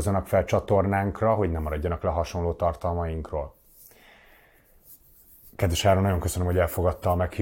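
No technical faults can be heard in this speech recording.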